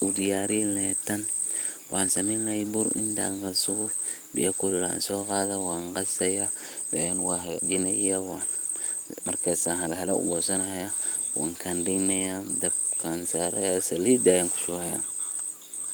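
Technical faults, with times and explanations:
No technical faults are audible anywhere in this recording.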